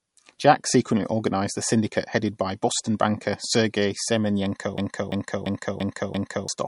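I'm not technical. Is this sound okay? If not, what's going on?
No. MP3 compression runs throughout, likely from squeezing the file too hard: everything above 11.2 kHz is gone, leaving the speech dull and watery. A system hang loop hits from 4.78 to 6.49 s: the computer froze and replayed one 0.34-second snippet five times, producing a stutter.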